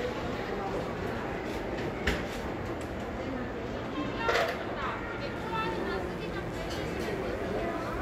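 From 5.36 s to the end, 60 Hz mains buzz sits well below the sound. Its switching spikes give it a raspy edge that smooth hum lacks.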